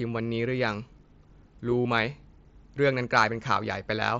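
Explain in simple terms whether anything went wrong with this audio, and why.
At 1.82 to 1.85 s, concealed Bluetooth headset packet loss: a short run of lost packets between headset and phone, patched by repeating the last bit of sound, heard as a brief buzzy hold, then a slight warble as speech resumes through the wideband mSBC headset codec.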